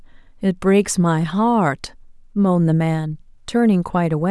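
Speech recording with no audible technical faults anywhere.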